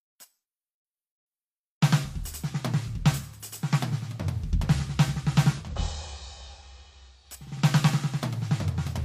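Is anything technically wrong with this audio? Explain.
Yes. From 5.49 to 7.30 s the music shows digital radio blending to analogue: the receiver lost its digital stream and cross-faded over 235 ms to the FM broadcast. Level drops about 2 dB, and hiss enters roughly 35 dB down. A spectrogram shows a raised noise floor.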